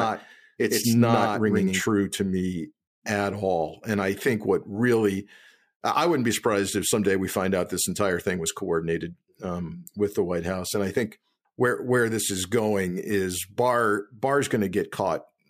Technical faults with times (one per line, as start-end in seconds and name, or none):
0.00-1.82 doubled audio track